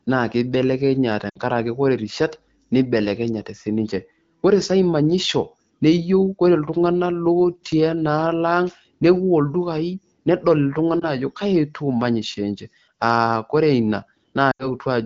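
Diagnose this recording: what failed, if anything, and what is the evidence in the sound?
Lost AMR speech frames, a radio-link fault. Audio smears and dips at 1.29–1.38 s, before "ore rishat neibelekenyate sii". Again at 11.00–11.07 s, between "newuo ildukai nedol" and "ajo kaji". Then at 14.52–14.69 s. Frames failed their checks. The decoder stretched the last good settings while fading.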